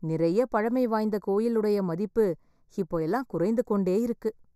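The speech sounds hollow and phasey from start to finish, with fixed notches scooping into the upper range. That colouring is channel delay (comb filtering). One channel runs a fraction of a millisecond, only a few samples, behind the other, and when the two are summed to mono the shared content cancels at evenly spaced frequencies. Here the first deep notch lands around 3 kHz, with further notches repeating above it.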